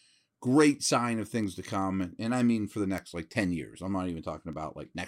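From 0.28 s to 4.92 s, sharp ticks of uneven strength run through the speech at a steady rate, about five per second, around thirty in all. These are word clock ticks. The receiving clock is unlocked from the sender, roughly 100 ppm off, so one sample slips at each tick.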